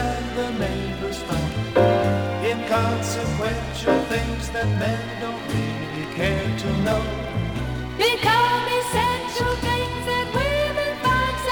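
No technical faults can be heard anywhere in the audio.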